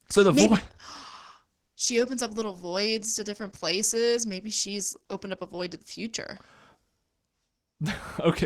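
From 0.0 to 6.0 s, the adaptive stream starts at a low bitrate, which fits 16 kbit/s Opus. Treble is missing or synthetic. Codec artefacts are stronger. At 6.0 s quality jumps up with no gap.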